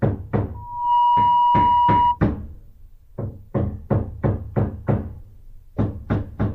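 From 0.54 to 2.19 s, a 963 Hz tone swells into a loud squeal: loudspeaker feedback squeal, as the microphone re-amplifies its own loudspeaker's output.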